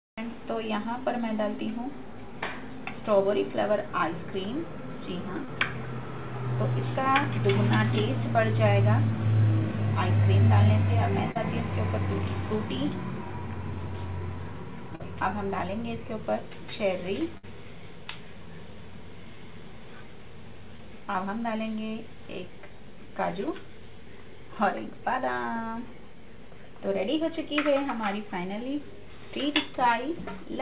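Through a call path with nothing above 4 kHz, which fits a 64 kbps G.711 mu-law link, you get a string of short concealed packet losses at 3.40, 5.45, 11.31 and 14.95 s, then 19.35 and 20.76 s. Each time a packet's worth of audio, 20 or 40 ms, didn't make it, and the receiver papered over the hole by stretching the last bit of sound before easing back into the real signal. The fills run from about 12 to 41 ms, so they come across as quick smears or little wobbles.

The one burst of packet loss sits between 17.37 and 17.45 s. That's about 60 ms gone in one go, with roughly 56 ms of it filled by the concealer carrying the last sound on and fading it down. You hear a brief held buzz or dying hiss, and then the audio picks up a bit further along, with the stretch in between simply missing.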